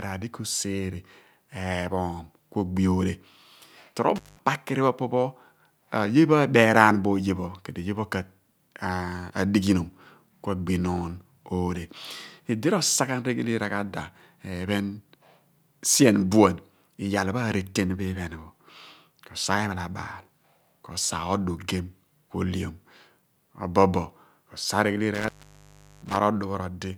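At 4.16 s, just before "pho po pho", an intermittent contact drops the speech for about 180 ms. A loose connection briefly opens, leaving crackle and faint hiss. It recurs at 25.14 s for about 740 ms.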